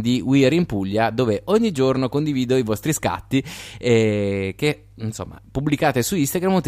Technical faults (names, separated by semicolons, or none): mains hum